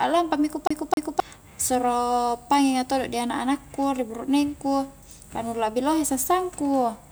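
From 0.67 to 1.2 s the speech catches like a CD stuck on one turn: a 263 ms stretch repeats twice with brief mutes, showing identical spectrogram blocks separated by thin gaps.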